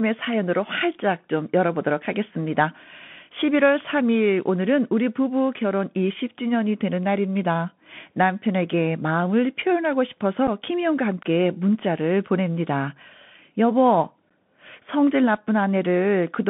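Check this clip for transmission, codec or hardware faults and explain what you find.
The speech sits in a narrow telephone band and carries two brief dropouts. Throughout, it sounds thin and boxed, with scratchy sibilants, a grainy hiss beneath it and roughness on louder passages. That is the Bluetooth CVSD headset codec, which fits a 64 kbps one-bit delta link. Its adaptive step lags fast loud changes, and the line passes only about 150 Hz to 3.5 kHz.

At 10.47 s and 14.30 s the sound briefly cuts out with a hard edge, gaps of 7.5 ms and 11.2 ms. This is unconcealed Bluetooth headset packet loss, most likely a couple of packets and then about three lost between headset and phone. Nothing was filled in to cover the gaps.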